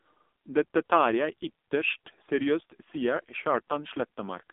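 Throughout, the speech carries AMR narrowband mobile codec damage: band-limited to roughly 250 Hz–3.6 kHz, heavily buzzy and synthetic, consistent with a low rate near 5.9 kbps.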